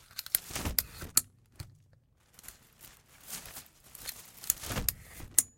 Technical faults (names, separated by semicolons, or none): compressed frames skipped